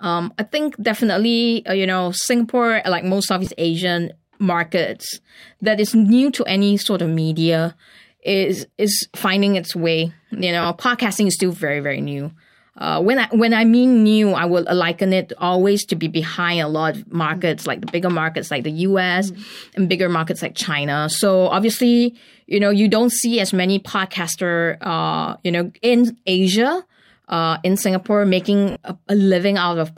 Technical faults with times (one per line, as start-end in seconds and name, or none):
3.45-3.47 lost LE Audio frames
10.63-10.66 lost LE Audio frames
28.71-28.76 lost LE Audio frames